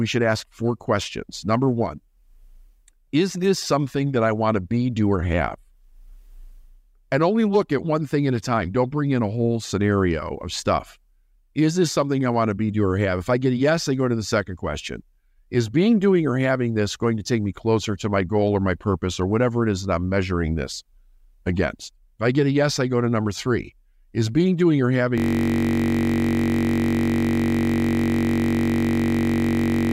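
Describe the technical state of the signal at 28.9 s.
At 28.9 s the audio is a steady buzz near 46.9 Hz. This is a system hang loop, running from 25.18 s, just after "being doing or", to the end. A 21.33 ms piece, which fits a 1024-sample buffer, repeats hundreds of times while the frozen system leaves the hardware cycling its buffer.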